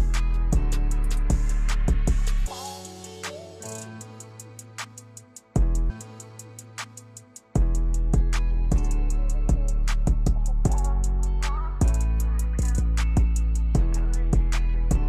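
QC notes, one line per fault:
5.86–7.85 s, stream segment repeated: about 2.0 s plays a second time after a small blip at the jump back, adding time rather than dropping any, unlike a dropout.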